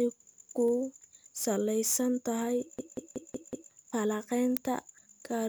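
From 2.79 to 3.72 s, right after "salaysan tahay", a system hang loop occurs. The host stalled while the hardware kept replaying one 186 ms block, which fits an 8192-sample ring buffer. It repeats five times at 5.38 Hz, producing a hard machine-gun stutter.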